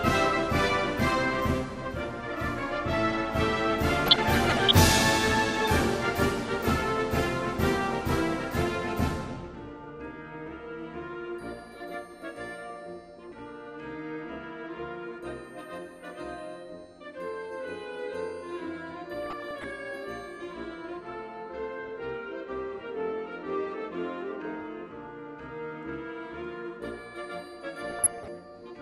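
MP2 compression runs through the whole clip, with plainly audible damage. The sound is dull and carries a granular, gurgling edge, likely from MPEG Layer II coding at a low rate that fits about 80 kbps. Short of bits, the encoder switches off upper sub-bands and coarsely quantises the rest, so the top end flickers in and out and the remaining bands roughen.

DAB burbling appears at 4.06 to 4.72 s, 13.29 to 13.39 s, 19.26 to 19.64 s and 27.90 to 28.28 s. Bit errors at a rate of a fraction of a percent slipped past error correction into the MP2 data. Corrupted samples put short blips of noise in single sub-bands and corrupted scale factors made sub-bands jump in level for up to a frame, producing burbling over the sound. The longest burst is at 4.06 s, and the one at 13.29 s is a brief blip.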